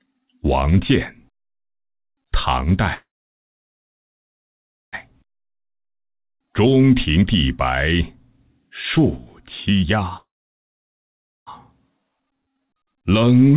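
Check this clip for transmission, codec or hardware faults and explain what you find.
Two kinds of fault are present: two call audio freezes and two jitter buffer speed-ups, heard through a narrowband path with nothing above 4 kHz.

Call audio freeze at 2.94 to 4.95 s and 10.17 to 11.49 s. The jitter buffer likely ran empty while packets were delayed. A brief fading continuation gives way to silence of about 1.9 s and 1.2 s, and the audio then resumes where it stopped with nothing lost.

Jitter buffer speed-up at 5.11 to 8.19 s and 8.98 to 10.05 s. The buffer trimmed excess delay by cutting out pitch-period slices, roughly 400 ms and 200 ms in total. Playback runs at 112% and then 119% speed at unchanged pitch, so it sounds hurried.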